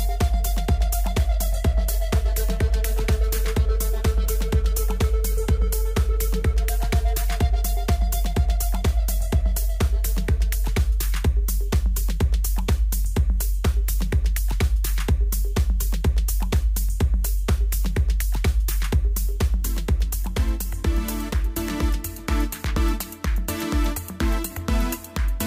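No technical faults can be heard anywhere in the audio.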